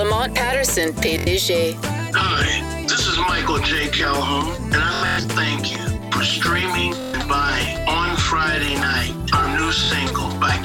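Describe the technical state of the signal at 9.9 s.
At 9.9 s there is a brief machine-gun buzz: a tiny slice of audio repeats several times in quick succession from 9.85 to 9.91 s, then the sound picks up further along, as though it had kept playing underneath. This is a Bluetooth stutter. Data arrived late or was lost, and the receiver kept replaying its last buffer until fresh audio came. About 46 ms of material is missing, which fits roughly two dropped packets.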